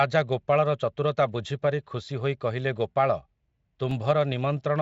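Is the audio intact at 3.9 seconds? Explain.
No. At 3.91 s the signal chain dropped a block of samples and wrote zeros in their place, a block of digital silence about 2 ms long. Because the waveform jumps straight to zero and back with no fade, each edge forms a sharp discontinuity. With so short a gap, the two edges merge into a single brief tick rather than an audible hole in the speech.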